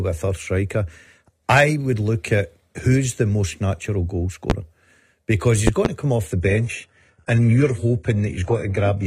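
At 4.50 to 4.53 s, just after "the most natural goal", a loud pop cuts in. It is one sharp click, far louder than the speech, roughly 20 dB above it. The speech carries on beneath it. A second loud pop follows at 5.67 to 5.88 s, after "because he's". This time two pops land in quick succession. A sudden voltage pulse was likely added to the signal, perhaps from a switch, a plug, static or a driver glitch.

From 6.30 s to the end, after "come off", the sound changes abruptly with no gap. The adaptive stream has dropped to a lower bitrate. Nothing is left above 11.4 kHz. Codec artefacts rise. This points to a switch from a good AAC stream to a very low-rate HE-AAC version after the connection slowed.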